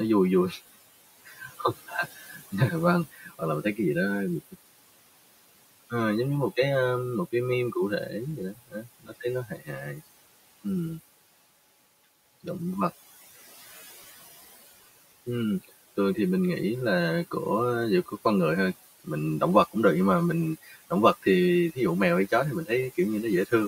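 Channel delay (comb filtering) runs from the start: one channel arrives about 5 ms late, so the mono sum cancels at notches from roughly 100 Hz upward, sounding hollow and phasey. Noise suppressor artifacts are also constant: the room noise, about 17 dB below the speech, is pulled down by about 17 dB between phrases and rises under them. Speech cut by the noise suppressor occurs at 1.25–2.53 s, 3.12–3.78 s, 8.53–10.01 s and 20.63–20.91 s, where quiet speech is mistaken for noise and dropped by up to about 19 dB, leaving parts of those stretches swallowed and faint.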